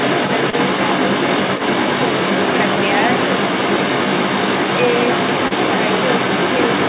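From start to finish the echo canceller likely failed to remove the other side's voice leaking through from the loudspeaker, so a second voice runs under the speech for the whole clip, somewhat louder than the main talker, within the narrow 4 kHz band of the G.711 call path.

At 0.50 to 0.56 s and again at 5.48 to 5.53 s, short concealed packet loss appears. About 30 ms of audio failed to arrive each time, and the receiver patched the gap by extending the preceding sound before blending back, leaving a brief smear or wobble where a short consonant may drop out.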